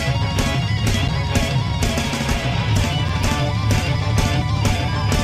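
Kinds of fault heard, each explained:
Gap between chunks: the audio arrives in 2-second blocks, and a short stretch of silence, about 7 ms, is inserted at each join, so nothing is lost but the sound drops out abruptly at 1.08 s and 3.09 s.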